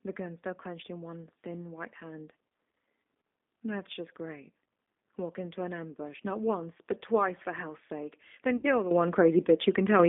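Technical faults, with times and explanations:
Throughout, G.729 codec: the sound is confined to roughly 250 Hz to 3.6 kHz and carries a rough, slightly synthetic grain, which fits an 8 kbit/s G.729-family codec. Unlike a plain band-limited line, it rebuilds each short frame from a filter and sparse pulses.
8.57 to 8.66 s, VoIP packet loss concealed by the speech codec: about 60 ms of audio went missing, pointing to three lost packets. The decoder filled the gap by stretching the last sound into a fading buzzy tone or coloured noise rather than silence, and the sound stays weak briefly after.
8.91 s and 9.99 s, microphone volume stepped up: the level jumps abruptly by 10 dB at 8.91 s and by 6 dB at 9.99 s, with the background rising along with the sound. A single instant step, not a smooth ramp, marks a raised input-volume setting.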